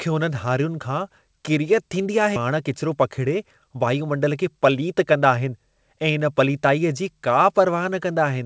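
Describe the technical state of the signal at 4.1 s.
At 4.1 s the speech is inside a jitter buffer speed-up running from 2.50 to 5.52 s. Repeated removal of pitch-period slices, about 0.2 s in total, plays it at 108% speed with unchanged pitch, so it sounds hurried. The waveform shows compressed syllables, and the spectrogram keeps its harmonic spacing below the codec's 8 kHz ceiling.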